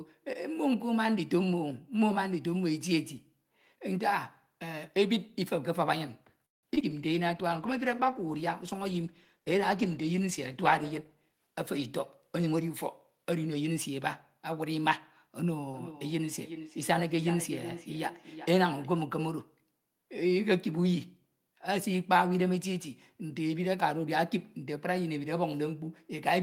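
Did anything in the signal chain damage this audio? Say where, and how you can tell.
Yes. Between 6.45 and 6.85 s the network dropped or delayed packets repeatedly, which produced repeated packet loss with a robotic sound. Four gaps fall in that stretch. The receiver patched 195 ms of them by extending the last sound, and 60 ms is simply missing. The longest hole is 175 ms, and about half the span is concealed. That is why the speech turns choppy and metallic, with pieces cut out.

From 6.93 to 12.71 s there is a call bitrate drop. The bandwidth estimate fell, and the encoder was told to go from 32 kbps to 15 kbps. It stayed at the lowest rate for about 4 s. With so few bits, Opus quantises the speech more coarsely and trims the upper band. The voice sounds rougher, watery and muffled until the rate climbs back near 12.7 s.

A jitter buffer slow-down runs from 6.93 to 7.48 s. The receiver's buffer had run short or had just raised its target delay, so it built up a reserve by repeating single pitch periods and bits of pause, adding 43 ms. 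Playback runs at 93% speed with the pitch unchanged, and the sounds are drawn out.

The opposite correction, a jitter buffer speed-up, comes three times: 11.28–11.80 s at 112%, 12.28–12.71 s at 110%, and 13.10–13.55 s at 111%. Each time the buffer held more audio than its target, as happens when late packets arrive in a bunch. The receiver cut short pitch-period slices, roughly 70 ms in the first burst and about 50 ms in each of the others. The speech sounds hurried at normal pitch.

From 15.73 to 18.96 s there is feedback echo between two devices, picked up acoustically in the room. A second device on the same call is replaying this microphone's signal, and the microphone captures it again. The local echo canceller cannot remove it, because it only cancels its own device's output. The speech returns at a fixed interval of roughly 0.4 s, thinner and more ringing, peaking at about 12 dB below the direct speech.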